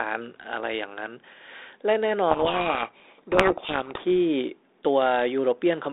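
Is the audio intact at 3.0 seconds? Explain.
No, 3.0 s falls inside a codec payload misread from 2.3 to 4.07 s. The receiver unpacks the G.726 code words in the wrong bit order, burying speech in harsh distortion. A spectrogram shows broadband noise filling the 300 Hz to 3.7 kHz line band, with the waveform turned ragged and dense.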